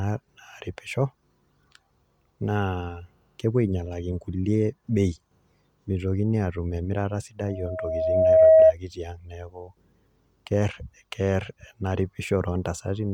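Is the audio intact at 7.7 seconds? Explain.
No. From 7.48 to 8.73 s a microphone picks up the loudspeaker it feeds, and at 638 Hz the loop gain exceeds one. That tone swells over roughly a second into a squeal some 15 dB above the speech, ending just before "ti ang' neeku".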